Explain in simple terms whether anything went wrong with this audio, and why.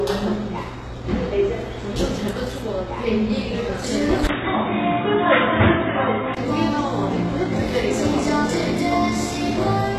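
Throughout the recording the sound has a gritty, metallic sheen on its brightest parts, and nothing sits above about 12.3 kHz. Sharp, hissy sounds come out rough rather than crisp. This is the mark of HE-AAC compression, which is likely here. That kind of encoder keeps only the lower part of the sound properly and fakes the top end by copying lower material upward. The brightness survives, but it no longer matches the real sound underneath.

From 4.27 to 6.37 s the sound suddenly turns dull and boxy. Everything above about 3.8 kHz vanishes, and a faint new background noise appears. The overall loudness barely changes. A very short gap of about 20 ms marks the switch. At 6.37 s the fuller sound returns. This points to the input switched to a poorer device, likely a lower-quality microphone or headset that briefly took over before the original one came back.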